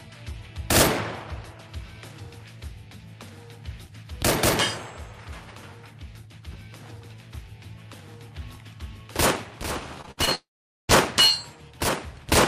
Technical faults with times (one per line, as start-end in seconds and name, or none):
10.01-10.29 repeated packet loss (robotic sound)
10.35-10.91 long network dropout